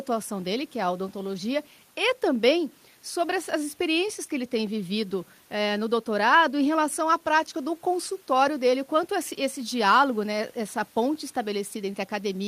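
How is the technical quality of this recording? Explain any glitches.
No audible technical faults.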